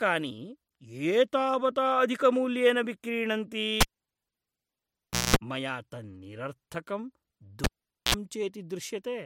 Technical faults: cable pulled and plugged in

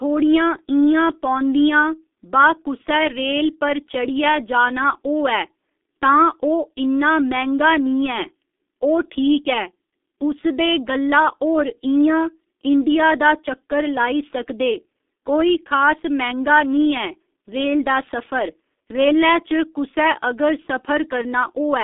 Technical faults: G.723.1 codec

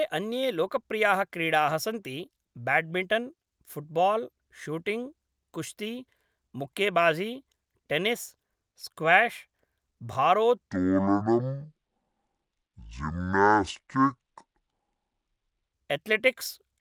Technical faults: section at the wrong speed

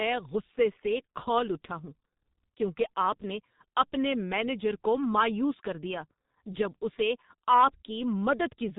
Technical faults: G.723.1 codec

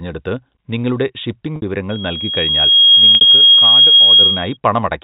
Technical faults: packet loss with pitch repetition; loudspeaker feedback squeal

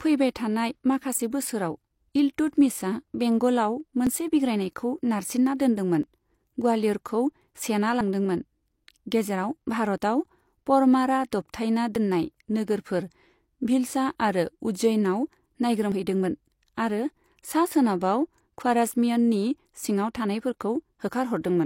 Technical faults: overlap between stream segments

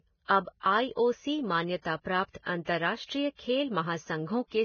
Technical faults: Vorbis compression; pre-echo

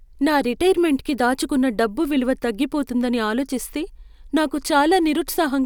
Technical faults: none

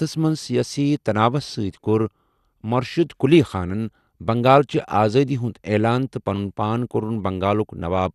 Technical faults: MP2 compression

